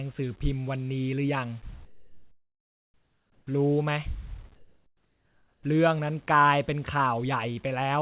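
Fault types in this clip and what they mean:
Comfort noise in place of the background, 1.85–3.47 s and 4.55–5.63 s: in these speech pauses the real background gives way to a steady, featureless hiss, about 13 dB and about 11 dB quieter, likely because transmission paused and the receiver synthesised filler noise.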